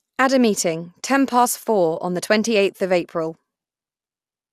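The speech was likely re-encoded through lossy MP2 about three times, consistent with 96 kbit/s, leaving it swirly, hollow and smeared throughout, with blurred attacks and nothing above 15.3 kHz: generation loss.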